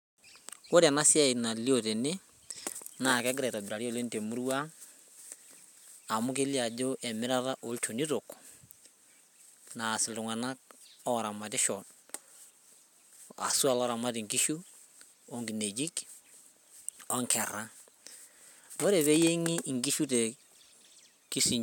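No technical faults can be heard anywhere in this speech recording; the signal stays continuous and stable throughout.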